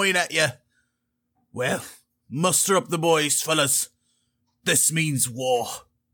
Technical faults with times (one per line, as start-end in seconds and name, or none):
none